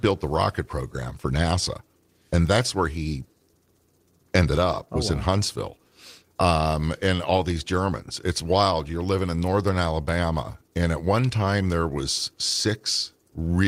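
Speech recording with no technical faults to report: level, continuity and timing hold steady throughout, with nothing dropped, clipped or interrupted anywhere in the signal.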